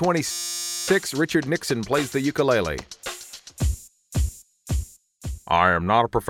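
From 0.31 to 0.88 s the system hangs while the sound hardware keeps replaying its ring buffer, a system hang loop. A 5.8 ms slice, which fits a 256-sample buffer, repeats nearly a hundred times, producing a steady 172 Hz buzz.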